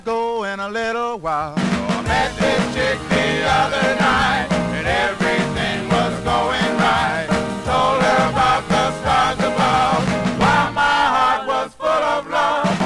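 No technical faults can be heard anywhere in this audio. There is no moment in the clip that stands out as a problem, so there are no times to point to.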